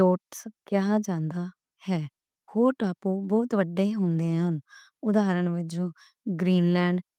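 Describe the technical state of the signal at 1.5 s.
At 1.5 s the speech signal is intact, with no audible technical fault at that moment.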